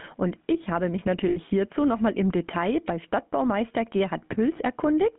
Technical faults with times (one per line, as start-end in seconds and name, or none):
0.00-5.19 gain pumping
0.00-5.19 GSM full-rate codec
1.28-1.38 lost GSM frames